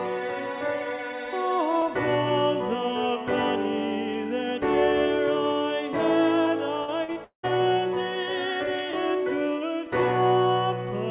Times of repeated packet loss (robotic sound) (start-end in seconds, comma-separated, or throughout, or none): 6.84-7.46